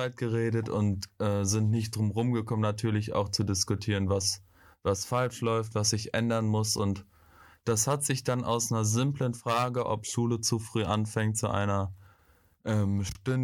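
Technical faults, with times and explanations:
Nothing stood out on listening to this speech recording.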